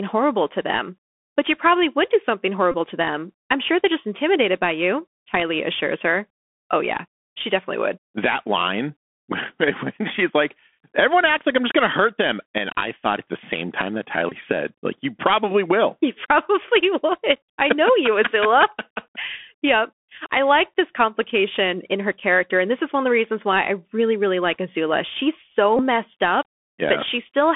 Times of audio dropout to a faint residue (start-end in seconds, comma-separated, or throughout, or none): none